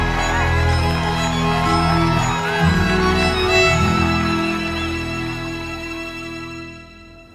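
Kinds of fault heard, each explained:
No kinds of fault are heard.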